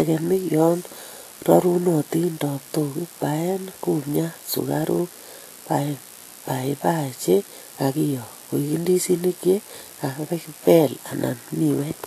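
From start to finish the speech carries a hissy, grainy texture, with tones turned rough and consonant onsets smeared, most likely from Vorbis compression at a low setting, which fits a bitrate around 36 kbps. The encoder has rebuilt the treble as coarse noise that keeps the original energy but loses the detail. On a spectrogram the content stops sharply at 14.2 kHz, and beneath that line the upper band looks speckled and blotchy.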